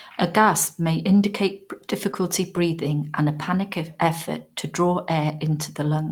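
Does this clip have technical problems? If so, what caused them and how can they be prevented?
Yes. Between 2.11 and 2.22 s, after "gasp may indicate" and before "breathing and a panicked", short concealed packet loss left about 20 ms missing. The decoder extrapolated the preceding sound to fill it, leaving a brief smear. Prevention: use a steadier network path with a larger jitter buffer so packets arrive in time.

At 2.13 to 2.15 s, a lost packet rebuilt from error correction replaced about 20 ms, which points to one packet, with its low-bitrate backup copy, so that stretch sounds rougher and noisier. Prevention: reduce packet loss on the link, or raise the bitrate so the redundant copy carries more detail.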